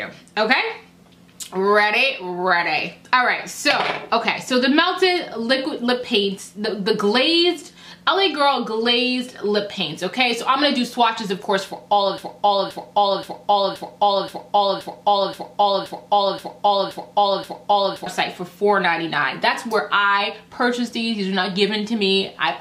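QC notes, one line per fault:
12.18–18.06 s, broken-record loop: one 0.53 s fragment plays 11 times back to back, likely from a stalled player or stream resending its last buffer, so the audio due then is lost. The waveform shows identical tiled blocks, and the spectrogram shows a pattern repeating every 0.53 s.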